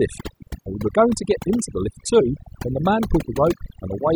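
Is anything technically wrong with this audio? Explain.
Yes. Throughout the speech there is overdone noise removal: the noise reducer, set too aggressively, drives individual frequency bands down whenever they sit near its noise estimate, taking quieter speech detail with them. Pauses fall to near silence with twinkling specks.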